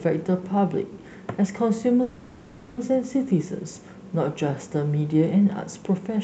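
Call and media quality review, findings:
Call audio freeze, 2.02–2.78 s: sound smears into a fading buzz for about 0.75 s, no silence. Likely jitter-buffer underrun from held packets. Unlike loss, playback resumes where it stopped; nothing skipped, later audio now about 0.75 s late. Band tops out near 8 kHz.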